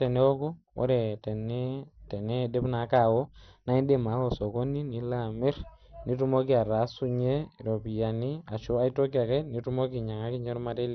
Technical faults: MP2 compression

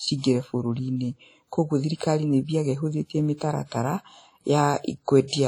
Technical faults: WMA compression

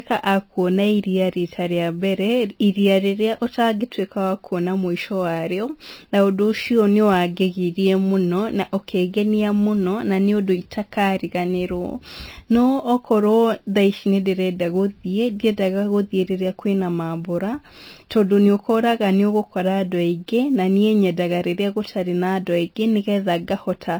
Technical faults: MP3 compression; sample clock jitter

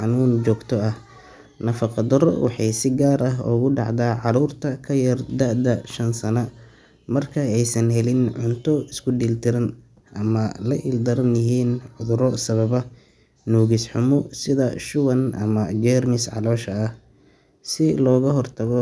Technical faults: none

